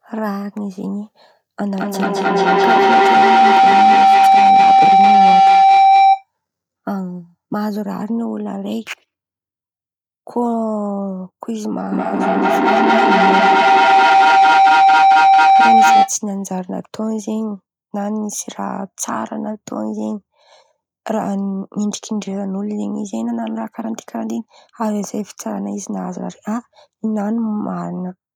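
Speech with two bursts of feedback howl, 1.63–6.27 s and 11.92–16.17 s. A loop between two nearby devices gains level each pass, narrowing to a tone near 700 Hz that pulses roughly every fifth of a second and peaks about 11 dB above the speech.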